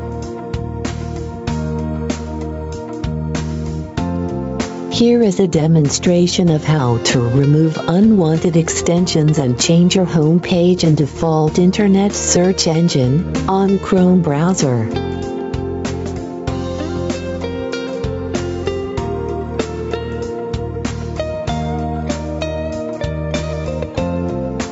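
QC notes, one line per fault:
Throughout, gain pumping: the level ducks by around 10 dB under each loud sound, so everything sounds squashed. Likely the input gain is set far too hot with a fast limiter clamping down, on top of the call's band-limited, sub-8 kHz sound.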